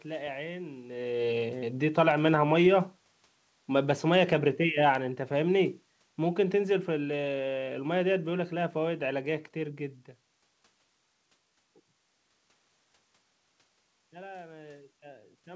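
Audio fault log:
3.68–9.05 s, automatic gain falling: The gain control judged the input too loud and eased it down about 7 dB. The speech and the room noise sink together.
14.1 s to the end, automatic gain rising: The gain control judged the input too quiet and raised it gradually. The speech and background swell together over more than a second.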